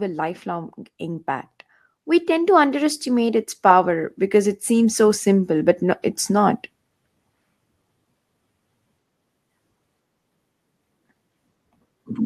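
From 2.05 to 6.59 s, automatic gain rising lifts the level by about 9 dB. The speech and background noise swell together as the control ramps up.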